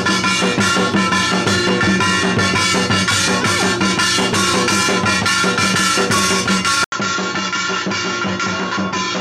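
At 6.84 s, after an 80 ms gap, sound dulls and quietens, likely an input switched to a poorer device; the spectrogram empties above 7.6 kHz.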